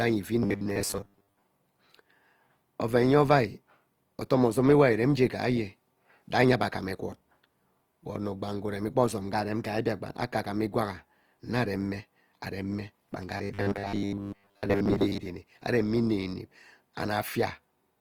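Across the whole clip the speech has a grainy, rough texture: consonants fizz and vowels carry a noisy grit instead of clean harmonics. This is Opus compression, likely in its music (CELT) mode at a rate near 24 kbps. Starved of bits, the encoder keeps each band's energy but fills the detail with noise or folded copies of lower bands. A spectrogram would show content reaching about 20.3 kHz, with few holes but smeared, hashy upper bands.

From 0.43 to 1.42 s, and again from 13.37 to 15.27 s, the speech turns into a rigid metallic buzz at 100 Hz that only loosely tracks the syllables. This is robotic sound from repeated short buffers. New audio arrives too rarely, so a 10 ms slice is likely replayed over and over while most of the real sound, around two-thirds or more, is skipped. A waveform would show identical short cycles repeating, and a spectrogram would show flat, evenly spaced harmonic lines at multiples of 100 Hz.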